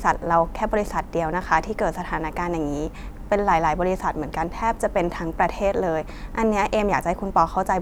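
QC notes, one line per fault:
No faults detected in this speech recording on review.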